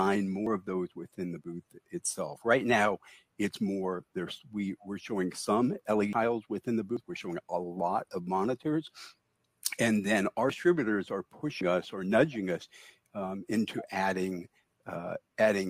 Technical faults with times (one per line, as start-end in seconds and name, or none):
0.46 dropped buffer (overrun)
6.13 dropped buffer (overrun)
6.97 dropped buffer (overrun)
10.50 dropped buffer (overrun)
11.61 dropped buffer (overrun)